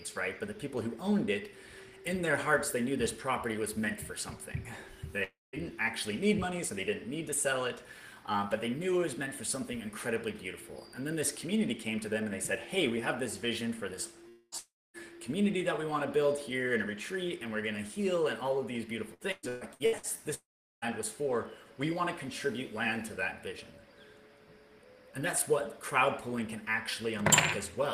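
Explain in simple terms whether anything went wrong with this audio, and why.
Long network dropouts at 5.23, 14.29, 14.58 and 20.34 s: the sound stretches into a fading buzz, then goes silent for up to 0.4 s, likely from audio that never arrived.

Repeated packet loss (robotic sound) from 19.14 to 20.18 s: six short holes, each patched by repeating the last sound, make it choppy.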